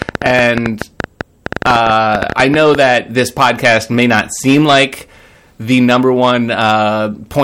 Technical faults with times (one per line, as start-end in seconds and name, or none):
0.00-7.43 hard clipping
0.02-2.76 train of clicks